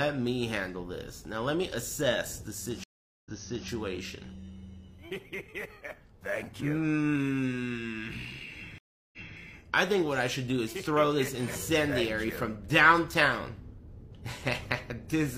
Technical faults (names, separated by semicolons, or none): stream reconnect